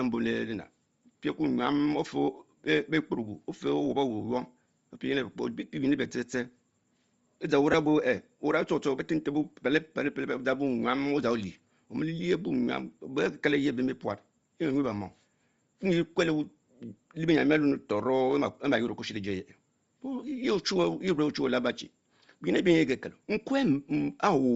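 From start to finish the speech carries a breathy, grainy sheen in its upper range, where high-frequency detail is replaced by a fizzy noise rather than simply rolled off. That is likely Bluetooth LC3 compression at a low rate, around 32 kbps. At that rate the codec discards much of the upper spectrum and fills the gaps with synthetic noise. A plain low-pass band limit would sound dull and clean instead.

At 7.72 to 7.74 s there is a brief lost LE Audio frames event. The missing stretch, about 15 ms, fits two consecutive 7.5 ms frames dropping out. The decoder covers the hole by repeating the last spectrum with scrambled phase, so the speech turns momentarily into a noisy smear rather than a hard click or dead silence. That smeared texture separates it from a simple dropout or a waveform repeat, which would sound cleaner or more buzzy.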